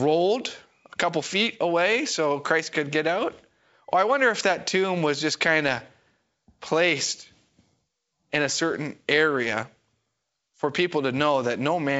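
The speech carries the band-limited character of G.722 wideband telephone coding at 64 kbit/s, with nothing above about 7.7 kHz and no audible technical faults.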